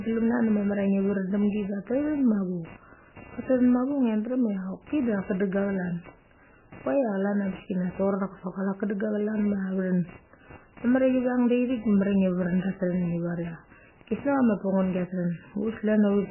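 Right from the start and running the whole way through, there's computer activity noise: a buzz pulsing at around 300 Hz, sitting roughly 20 dB under the speech, following the machine's load on the shared ground rather than the talking. The speech also sounds heavily watery and swirly with nothing above 3 kHz, likely MP3 compression starved at something like 9 kbps.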